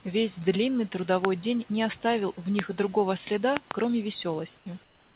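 Loud pops occur at 1.25 to 1.27 s, at 2.59 to 2.61 s, and as a quick double between 3.57 and 3.73 s. Each is a sharp click peaking roughly 20 dB above the speech, which carries on underneath. The likely cause is a voltage pulse from a plug, switch, static or driver glitch.

Sound dropped by the voice detector appears at 4.58 to 4.66 s. The sender's detector probably took part of the speech for background and stopped sending. For 80 ms the speech gives way to steady synthetic noise, losing about 30 ms of actual sound before transmission resumes.

Comfort noise in place of the background begins at 4.84 s and runs to the end of the clip. Once speech stops, the sender likely pauses transmission and the receiver fills the gap with generated noise. The real room background becomes a smoother noise of a different tone about 4 dB quieter, still band-limited to 4 kHz like the rest of the call audio.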